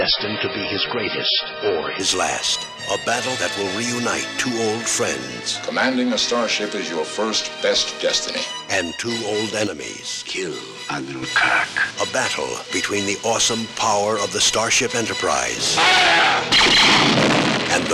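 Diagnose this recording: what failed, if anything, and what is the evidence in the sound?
The stage is network delivery. An adaptive stream is starting at a low bitrate. For the first 2.0 s nothing is heard above 5.5 kHz, and codec artefacts are strong. At 2.0 s the treble returns abruptly, with no gap. That points to a very thin MP3 stream switching up to a much fuller one.

A sudden gain jump appears at 9.67 s. The level drops by about 7 dB in a single step. The background noise drops with it. Both return at 11.23 s. The likely cause is a digital gain change in playback, applied without a ramp.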